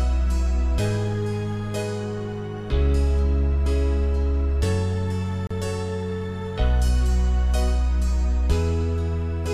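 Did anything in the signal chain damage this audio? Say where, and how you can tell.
Yes, there's a gap at a join of encoded pieces: a 35 ms silence at 5.47 s, likely from untrimmed encoder delay and padding where separately encoded chunks meet.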